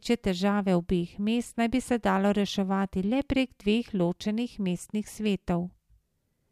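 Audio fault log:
No fault is heard in this speech clip.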